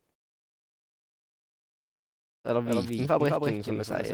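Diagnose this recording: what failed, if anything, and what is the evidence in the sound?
A doubled audio track runs through the whole speech: a second full-band copy trails about a fifth of a second behind, a few decibels quieter, with no decay or room colour, unlike a reflection. The likely cause is a slower second capture path mixing in at the driver or buffer stage.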